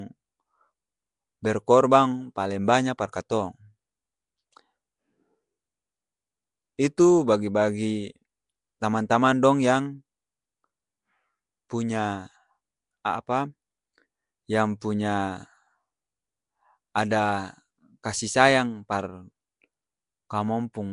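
A speech recording run through a low-rate Flash-era microphone codec, most likely Nellymoser compression (Nellymoser Asao). Each short block of samples gets a fixed, small bit budget, so weak bands get no real data and are filled with noise instead. Throughout the clip, that damage is plainly audible: the voice carries a rough, hissy halo and a smeared, underwater quality, and nothing is present above 10.6 kHz, which fits a stream of around 44 kbps. The same block coding causes pre-echo at 3.12 s, just after "paleng banya par". A sharp attack lands late in a coding block, and quantisation noise sized for that loud moment spreads back over the quiet part of the block ahead of it. The result is a brief hiss about 12 ms long before the onset, which blurs the attack and makes it sound softened rather than crisp.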